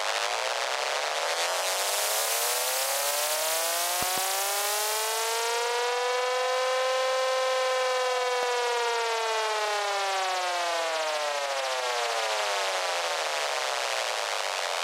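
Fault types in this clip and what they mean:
Loud pop: A sudden voltage step or pulse, likely from a plug, switch or static discharge, lands on the signal and is shaped by the downstream circuitry into a thump. Here a double pop spans 4.03 to 4.20 s, peaking roughly 15 dB above the surrounding sound, and a single pop at 8.43 s peaks about 10 dB above it. The sound continues underneath each one. A pop's weight and low-end body set it apart from a thin, tick-like click.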